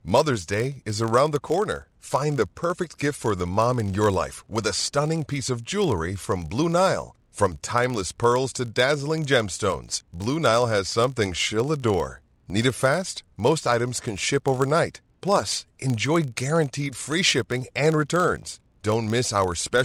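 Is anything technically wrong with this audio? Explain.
Yes. A filter is restarted on every block throughout the speech: it loses its state at each block boundary and starts from silence, so each block opens with a small transient. Blocks of 20 ms give a 50 Hz buzz that rises and falls with the speech level.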